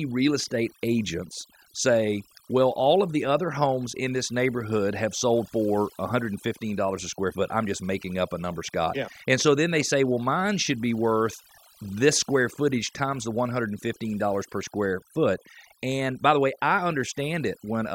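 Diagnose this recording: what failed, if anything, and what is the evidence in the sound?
Overdone noise removal in the processing stage: an over-aggressive suppressor mutes bands near its noise estimate throughout, leaving near-silent gaps with twinkling specks.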